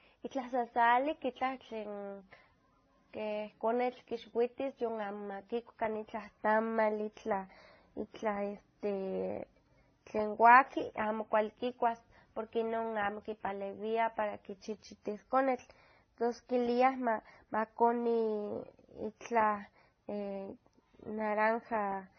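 Throughout, the speech stops at 6.3 kHz and carries stacked smearing and warble, likely transcoding between lossy codecs rather than one codec's single artefact signature.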